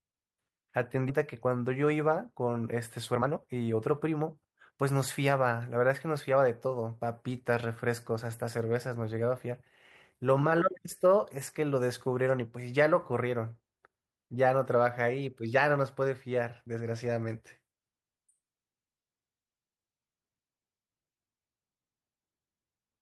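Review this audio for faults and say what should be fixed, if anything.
At 1.09 to 1.11 s there's a skip ahead. Playback jumps straight forward with no fill at all, and roughly a second and a half of speech is simply gone. A chunk of audio got dropped while later audio was already queued, either in transit or because the jitter buffer overflowed, so the two sides of the missing stretch are butted together almost directly. To prevent it, size the jitter buffer with enough headroom that a burst doesn't force it to discard queued audio.

Right after that, from 1.27 to 5.23 s, there's a jitter buffer speed-up. The speech runs at about 113% of normal speed while the pitch stays put, so it comes across as hurried. The buffer was holding more than its target, and to claw back the delay the receiver kept cutting out short pieces one or a few pitch periods long, around half a second in total. To prevent it, let the buffer drain more gradually so the catch-up is spread out and less audible.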